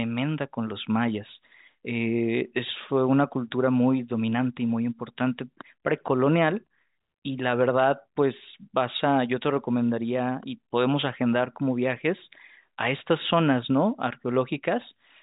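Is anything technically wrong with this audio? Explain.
No, nothing is technically wrong.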